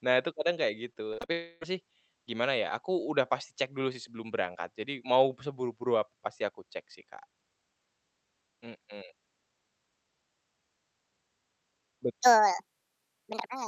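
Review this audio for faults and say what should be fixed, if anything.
From 0.93 to 1.30 s there's repeated packet loss, giving a choppy, robotic stretch. Four short holes, the longest about 46 ms, get patched by stretching the last bit of sound, so nearly a third of that span is filler. Better jitter buffering or forward error correction on the link would help here.

Right after, from 1.32 to 1.63 s, comes a long network dropout. About 0.3 s of speech is missing, and the whole gap is covered by that smeared, fading continuation of the previous sound rather than silence, so the real audio just skips ahead. The likely cause is a brief link outage, so a steadier connection or redundancy against burst loss is the fix.

From 12.22 s to the end there's a section at the wrong speed. It runs about 1.69 times too fast, so the speech jumps well over half an octave up and sounds hurried and chipmunky. 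It's likely a sample-clock or rate mismatch in playback or editing, so check the rate settings through the chain.

The Opus call path behind all this is working as expected, with its top end stopping around 8 kHz.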